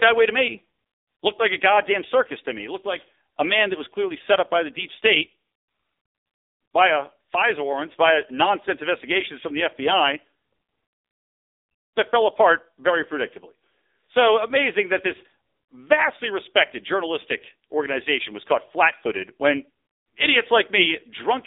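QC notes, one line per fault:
Throughout: AMR narrowband mobile codec. The speech has gone through AMR-NB coding, with heavy damage. It has a buzzy, synthetic edge, which fits a low mode around 6.7 kbps. At that rate each 20 ms frame keeps only a rough vocal-tract shape driven by a few pulses, so fine detail in the speech is lost. The band is squeezed to a phone line's 300 Hz to 3.7 kHz, and nothing is present above 3.8 kHz. This takes away sibilance and air and leaves the thin, boxy sound of a mobile call.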